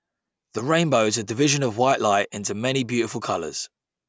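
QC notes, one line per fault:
Nothing to flag here, this speech clip came through without any trouble worth noting.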